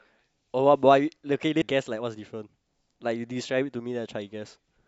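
At 1.62 s the speech jumps ahead by roughly a third of a second: compressed frames skipped, which fits about ten 32 ms frames lost or rejected by the decoder. Unlike a dropout, no silence is left.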